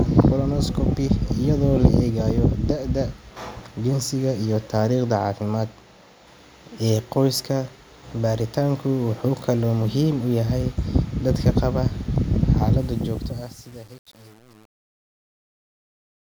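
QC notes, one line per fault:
12.79–16.37 s: truncation distortion on the fade-out, which fits an undithered 8-bit gain stage; the quietest speech coarsens into steps, turning gritty.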